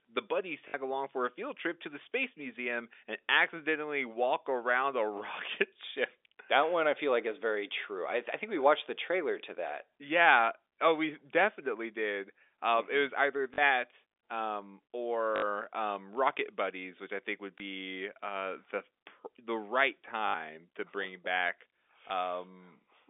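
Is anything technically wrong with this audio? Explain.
Yes. There is packet loss with the last packet repeated, at six points: 0.68 s (60 ms, just before "along for a field"), 13.54 s (40 ms, right after "was either"), 15.36 s (60 ms), 17.58 s (20 ms), 20.28 s (60 ms, between "uh the the right" and "to bring back") and 22.08 s (20 ms). The gap lengths fit 20 ms packets. When packets went missing, the receiver replayed the last good one until new audio arrived. Because the repeat ignores the pitch period, the longer runs buzz at about 50 Hz, giving a brief robotic stutter. All of this sits within the narrow 300 Hz to 3.6 kHz telephone band of the G.711 line.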